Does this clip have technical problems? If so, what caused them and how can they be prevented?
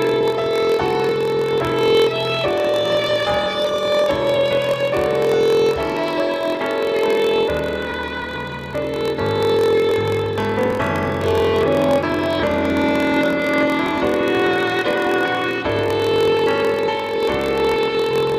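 Yes. Throughout the clip there is a block size mismatch (padded): one stage hands over shorter blocks than the next stage reads, and the shortfall in each block is filled with silence. The buzz repeats at 43.1 Hz, which fits a 1024-sample read block. That brief gap in every block produces a steady buzz at that rate, and the audio runs slow at 0.938 of normal speed while keeping roughly its normal pitch. To prevent it, configure both stages to use the same block size, or place a proper buffer between them that accumulates samples until a full block is ready.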